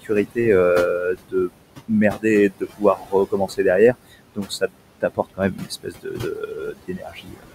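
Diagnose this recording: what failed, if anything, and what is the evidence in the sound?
Noise suppressor artifacts run throughout the clip and come from the call-processing stage. The room noise, sitting about 12 dB below the speech, is pulled down by about 21 dB in the pauses, then rises again under the speech. The suppressor estimates steady noise in each frequency band and applies a gain cut frame by frame. Its gain keeps switching between speech and gaps, which makes the background pump.

Speech cut by the noise suppressor occurs at 0.03–0.39, 0.99–1.51, 2.11–2.25, 2.5–3.14, 3.3–3.65, 4.35–4.73 and 5.01–7.53 s. In each span, parts of the speech dip by about 18 to 22 dB and sound swallowed or faint. The final stretch is the worst, with roughly a second and a half lost in pieces. Here the same processor misjudged quieter speech energy as noise and attenuated it together with the background.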